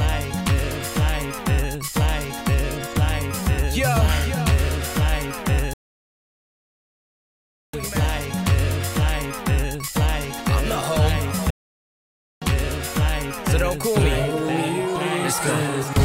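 At 5.73 s the sound cuts out for 2 s, then again at 11.50 s for about 0.91 s: playback stalls, likely the player starving for data or its thread getting blocked.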